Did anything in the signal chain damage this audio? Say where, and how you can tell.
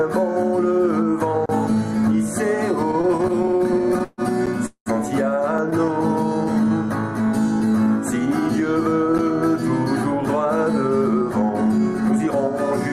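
Yes. Blocks of digital silence at 1.46–1.49 s (34 ms), 4.46 s and 9.18 s (10 ms each) cut out abruptly with no fade, pointing to an output buffer that wasn't filled in time.

Repeated stalls (stutter) from 2.91 to 4.21 s come from the network jitter buffer: 23 gaps, the longest 141 ms, bridged with continued sound covering about 30% of that span, so the audio drags.

A call audio freeze at 4.66–4.89 s holds the last sound, fades to about 100 ms of silence, then resumes where it stopped. This adds 202 ms of delay, likely from packets held up in transit.

A jitter buffer slow-down from 6.55 to 7.84 s runs the audio at 94% speed with pitch unchanged. Repeated pitch periods add 91 ms, drawing sounds out.

A jitter buffer speed-up from 10.19 to 12.28 s plays at 106% speed and trims around 150 ms of short segments to cut the backlog, so the audio sounds slightly hurried.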